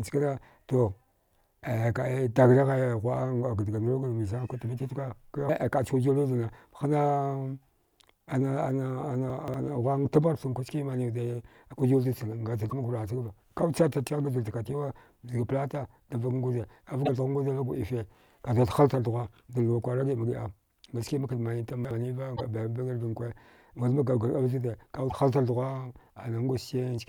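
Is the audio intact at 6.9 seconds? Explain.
Yes, at 6.9 seconds the speech plays through intact, with no audible fault at that point.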